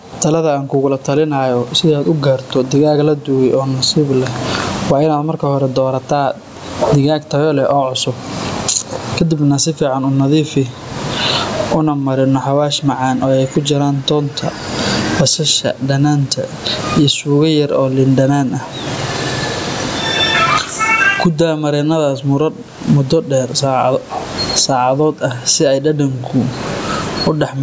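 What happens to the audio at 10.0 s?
At 10.0 s you're hearing the gain pumping that runs through the whole speech clip. The level keeps lurching, with a swing of something like 25 dB, and the room noise sits about 43 dB under the speech. The likely cause is a mic gain set way too hot, with a fast limiter clamping it on every peak, so everything sounds squashed and flat.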